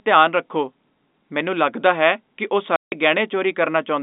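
Packet loss filled with silence cuts this telephone-band speech from 2.76 to 2.92 s, just after "ਲੱਗਦਾ ਹੈ ਕਿ ਉਹ". The 160 ms gap, which fits eight consecutive 20 ms packets going missing, was replaced by dead silence, so the sound drops out abruptly with hard edges. The G.711 line coding limits the band to roughly 200 Hz to 3.7 kHz.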